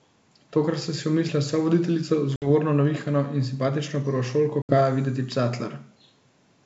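Speech over a wideband G.722 link shows packet loss on an ADPCM call at 2.36–2.47 s and 4.62–4.76 s, with roughly 60 ms and 70 ms of audio dropped. Each is a hard-edged silent gap, and the speech then returns slightly distorted while the decoder's predictor and step size resynchronise.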